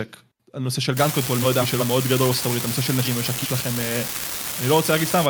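From 0.97 s to 5.26 s, an unreliable data bit adds a steady crackle that carries on through the pauses in the speech. One data line is marginal. Its bit flips in a random share of samples. Every flip makes a spike of the same size. Together they give a constant fizz under the speech.

Frames out of order first appear at 1.42 s and last to 1.81 s. Two neighbouring runs of frames swapped places and were decoded that way. The stretch plays with its halves exchanged. Each run lasts about 0.19 s, which points to four frames per run. It sounds like a garbled flutter. The same fault returns from 3.05 s to 3.46 s. No time is lost either time.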